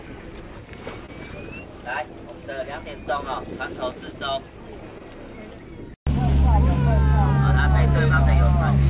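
At 1.06 to 1.10 s and again at 4.98 to 5.02 s, short concealed packet loss leaves a brief smear where about 20 ms failed to arrive and was patched by extending the preceding sound, not left as a silent dropout or hard click, within the call path's 4 kHz band.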